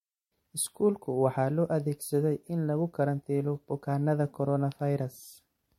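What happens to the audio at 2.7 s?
Generation loss is present at 2.7 s, as it is across the whole clip. The speech sounds swirly, smeared and hollow, with blurred attacks and nothing above 16.5 kHz, likely from about three successive lossy passes that point to MP3 at 64 kbit/s, each re-quantising on a shifted frame grid.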